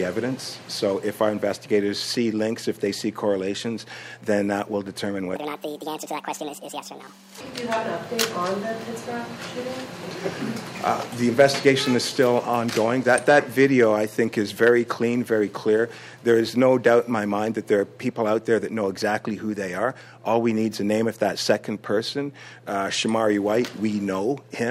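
From 5.36 to 7.41 s, a section at the wrong speed runs 1.62 times fast, about seven semitones higher. Likely a wrong playback clock.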